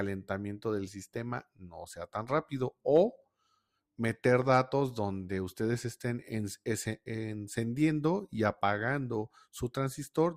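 A noise suppressor misjudged part of the audio as noise from 1.44 to 1.77 s, pulling it down by about 17 dB for roughly a third of a second. What should continue smoothly there dips and thins out. Between 4.24 and 4.44 s, two loud pops, likely from a voltage spike such as a plug, switch or static discharge, jump around ten decibels above the surrounding sound, which carries on beneath them.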